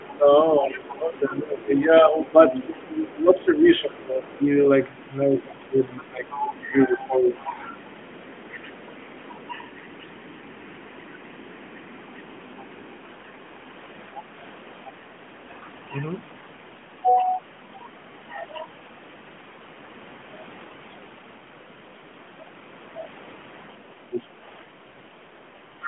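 From 0.04 to 4.38 s, the other side's voice leaks through about 20 dB under the speech. It is likely loudspeaker echo the canceller left behind. From 0.18 to 7.58 s, speech is suppressed in double talk. The voice dips by up to about 15 dB, for roughly four seconds in total. The likely cause is the canceller turning down both voices at once. Leakage returns from 5.38 to 13.7 s, about 25 dB down, likely uncancelled echo again. From 24.07 s to the end, suppression bites harder. It dips up to about 20 dB over about a second, likely the same double-talk confusion. A final scrap of the other side's voice appears from 25.84 s to the end, about 15 dB under the speech, likely more residual echo.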